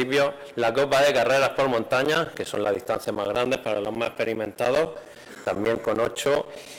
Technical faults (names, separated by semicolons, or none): periodic USB or driver dropouts